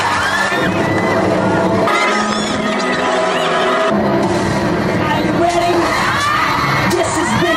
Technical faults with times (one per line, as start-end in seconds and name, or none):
1.87-3.90 section at the wrong speed